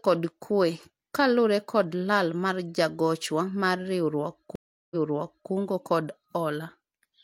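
At 4.55 s the speech drops out into about 0.35 s of silence, then picks up again at a point roughly 0.6 s earlier than where it stopped, so a short stretch is heard twice. The event runs to 5.51 s. This is a stream reconnect: the connection broke, the player went quiet while it reconnected, and a fresh decoder started mid-stream on data the server re-sent from slightly further back.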